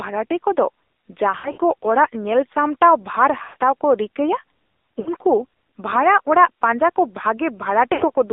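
Throughout, the speech carries the AMR narrowband mobile codec sound. The band is confined to 300 Hz to 3.7 kHz. The voice is buzzy and synthetic, which fits a low AMR-NB rate around 7.4 kbps.

Lost AMR speech frames follow, at 1.38 to 1.61 s, just before "ᱠᱚ ᱚᱲᱟᱜ ᱧᱮᱞ ᱥᱟᱢᱴᱟᱣ". About 120 ms is missing, scattered over 200 ms. The decoder stretches the last sound and fades it, so the speech warbles and dips.

Lost AMR speech frames occur again at 3.44 to 3.56 s, between "ᱚᱲᱟᱜ ᱧᱮᱞ ᱥᱟᱢᱴᱟᱣ ᱵᱷᱟᱨ" and "ᱠᱚ ᱨᱤᱠᱟᱹᱭᱼᱟ". About 120 ms is lost, and the sound drags, fades, then returns rough.

At 4.99 to 5.09 s, about 60 ms is lost. It gives a short warble.

At 7.94 to 8.11 s, about 100 ms is lost. The gaps are scattered over 180 ms, with the longest run at 80 ms. The sound smears and nearly fades out.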